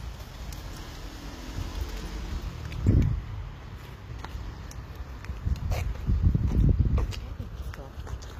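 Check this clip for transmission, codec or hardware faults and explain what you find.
One codec fault runs through the whole clip. Throughout, likely HE-AAC compression rebuilds the treble from copied lower bands, so the highs sound gritty and metallic and stop at 15.5 kHz.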